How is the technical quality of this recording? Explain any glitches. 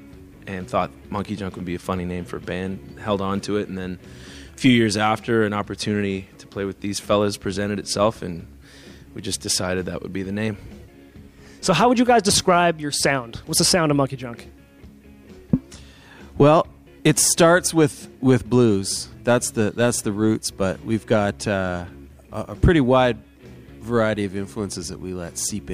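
No glitches to explain; the recording has no faults.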